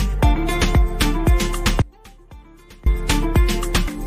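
An audio dropout to a faint residue runs from 1.82 to 2.86 s: the sound cuts abruptly to a faint leak roughly 25 dB down, likely a broken feed into a live downstream path.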